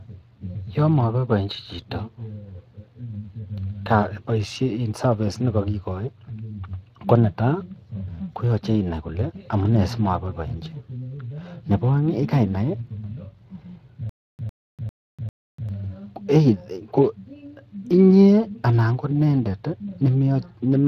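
Across the whole recording the speech has a rough, hoarse and somewhat noisy grain, with the top band ending near 15.3 kHz. That is plainly audible Speex codec damage, at a setting that points to roughly 22 kbps and leaves the excitation short of detail.

From 14.09 s to 15.69 s a stutter with silent gaps cuts in: a 103 ms fragment plays four times at a steady 398 ms pace, each separated by 295 ms of dead digital silence. The likely cause is a stalled stream retrying the same buffer, so the audio meant for that stretch is missing.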